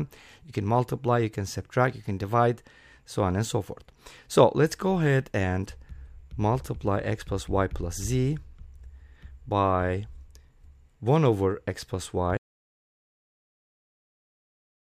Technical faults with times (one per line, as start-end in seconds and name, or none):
12.38-14.89 audio dropout to silence